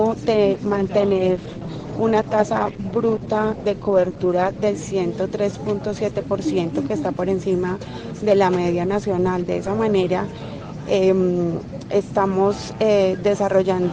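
From 0.55 to 4.55 s there's a call bitrate drop. The encoder gets squeezed, which fits a fall from about 64 to 10 kbps, so the top end gets cut off around 8 kHz and the sound turns muffled and a bit watery until it recovers.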